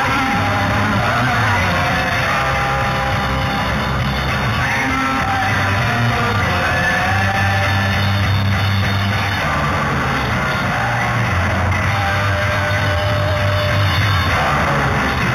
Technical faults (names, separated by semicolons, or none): imaging from linear upsampling